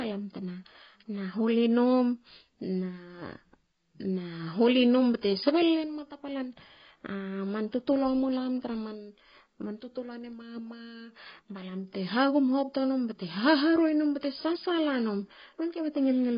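From start to finish the speech sounds dull and smeared, with nothing above 5 kHz and a warbly, fizzy edge on sibilants. That's heavy AAC compression damage, likely AAC-LC at a very low rate, which fits about 16 kbps, cutting off the top.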